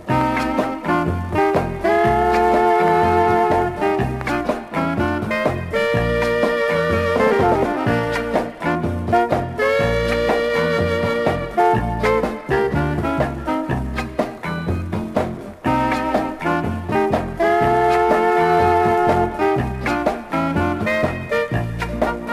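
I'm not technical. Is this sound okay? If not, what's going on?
Yes, nothing wrong can be heard in this sound. There is nothing here that needs fixing.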